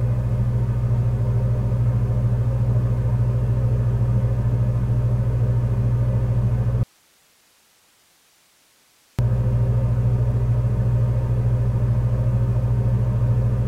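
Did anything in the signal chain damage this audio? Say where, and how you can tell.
Yes: an audio dropout to a faint residue, 6.83–9.19 s, likely an intermittent analogue connection. Sharp vertical spectrogram edges bracket hiss about 40 dB down.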